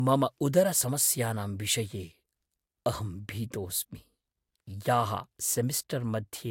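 Throughout the speech, nothing is present above 16.6 kHz, and the band below still carries the artefacts of a lossy codec. This points to low-bitrate audio saved at a high bitrate, likely an earlier low-rate encode whose losses the later high-rate MP3 simply preserves.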